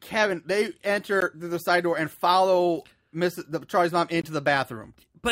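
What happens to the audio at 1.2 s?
At about 1.21 s the speech drops into a block of digital silence lasting 15 ms: a run of samples is replaced by silence, with no fade in or out. Because the waveform jumps abruptly to silence and back, the short gap is heard as a single tick or pop. On a waveform it appears as a flat line, and on a spectrogram as a thin blank column.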